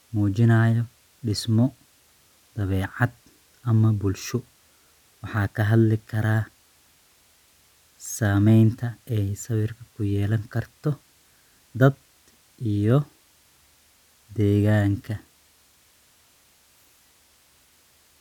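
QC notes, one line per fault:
Nothing stood out on listening to the speech in this clip.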